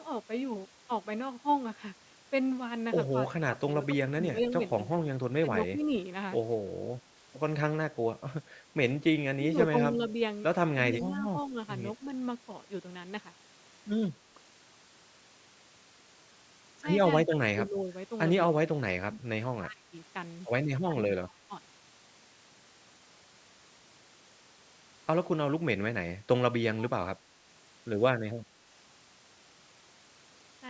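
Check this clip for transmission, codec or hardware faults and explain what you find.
One fault recurs through the speech: speech suppressed in double talk, at 3.3 to 4.97 s, 5.5 to 5.86 s, 9.28 to 10.02 s, 10.74 to 11.56 s, 17.2 to 17.88 s, 18.71 to 19.93 s, 20.87 to 21.52 s and 26.64 to 27.19 s.

In each stretch the talker fades, thins out or breaks into fragments, sinking by roughly 10 to 25 dB at the deepest points. The likely cause is an echo canceller that, with both ends talking at once, could not tell the near talker from loudspeaker echo and turned both down together.

On a waveform the envelope caves in mid-phrase and recovers unevenly. A spectrogram shows harmonics dimming in patches, with the upper bands fading, all below the 8 kHz ceiling set by the call's microphone processing.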